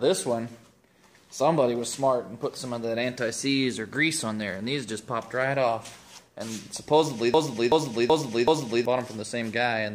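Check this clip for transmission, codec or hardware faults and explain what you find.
One fault is audible. From 7.34 to 8.85 s there is a broken-record loop. A 0.38 s fragment plays four times, back to back, each repeat identical. The likely cause is a stalled player, encoder or stream resending the last fragment it held. Whatever sound belonged in that span is missing.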